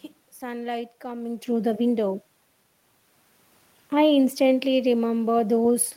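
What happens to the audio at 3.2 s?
Nothing goes wrong at 3.2 s: the speech carries on intact through that moment, with only the background noise of the room beneath it.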